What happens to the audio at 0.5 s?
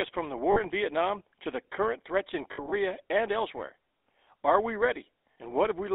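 Just after "from the", from 0.52 to 0.60 s, there is a burst of lost GSM frames. The decoder fills the gap by repeating the parameters of the last good frame, so the sound freezes into a brief rough, metallic ring instead of going silent. The missing stretch is about 40 ms, which fits two dropped 20 ms frames. It is too short to fade fully to silence.

This happens over the GSM full-rate codec, which runs through the whole clip. Its regular-pulse excitation gives the audio a buzzy, gravelly texture, plainly audible here. The band is limited to roughly 300 Hz to 3.7 kHz, so nothing above that range survives. The 13 kbps rate matches standard full-rate GSM.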